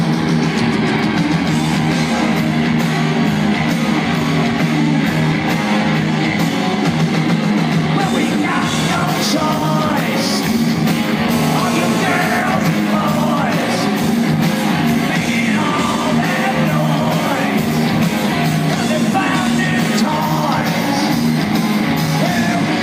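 From 11.29 to 12.39 s, GSM phone buzz: a nearby handset in a call has its 217 Hz radio bursts rectified. This causes a raspy buzz about 8 dB below the signal, seen as stacked harmonic lines. From 12.41 to 14.21 s, GSM signalling bursts follow as the talker goes silent. Even ticks with a longer buzz twice a second, roughly 20 dB down, show as short vertical clusters.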